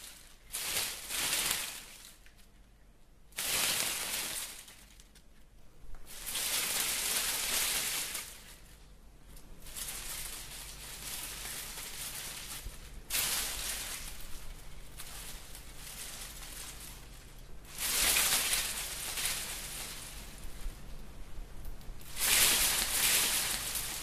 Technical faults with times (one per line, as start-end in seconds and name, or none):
19.17-24.02 doubled audio track